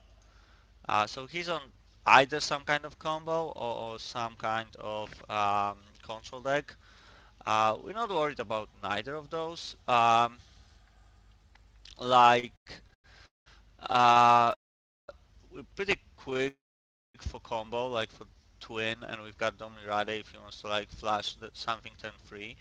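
Repeated stalls (stutter) begin at 12.39 s and run to 13.06 s. Packets arrive late again and again, so the jitter buffer empties seven times, in gaps of up to 100 ms. The receiver stretches the last sound to cover them, filling about 40% of that span, and the audio drags and catches without losing anything. A call audio freeze follows from 13.26 to 13.48 s. The sound stops and leaves about 170 ms of silence before resuming where it left off, which adds about 200 ms of delay. This is likely packets held up on the way. The stutter returns from 13.92 to 14.54 s as thirteen shorter catches of at most 34 ms. Straight after it comes a longer freeze from 14.54 to 15.10 s, with about 510 ms of silence. The same pattern repeats from 16.30 to 16.48 s, with five tiny stalls of at most 15 ms, and then a freeze from 16.48 to 17.16 s that holds about 580 ms of silence and pushes the delay out by about 660 ms. 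From 18.19 to 19.67 s there is a jitter buffer slow-down. The receiver rebuilds its reserve by repeating single pitch periods and adds 80 ms in total, so the audio plays at 95% speed with its pitch unchanged and sounds slightly drawn out. A jitter buffer speed-up runs from 20.87 to 22.56 s. To cut the extra delay, the receiver trims short pitch-period pieces, removing roughly 70 ms, so the audio runs at 104% speed at the same pitch.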